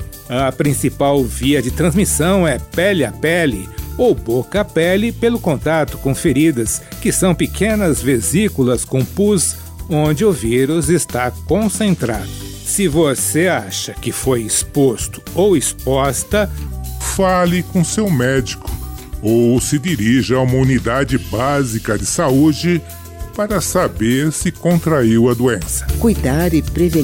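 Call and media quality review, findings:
Section at the wrong speed, 16.67 to 25.70 s. Playback drops to 0.864x, so the sound runs slower and sits roughly three semitones lower, with pitch and tempo shifting together at the boundaries. Likely cause: a resampling or clock-rate mismatch in the editing or playback chain, stretching this stretch against the wrong reference rate.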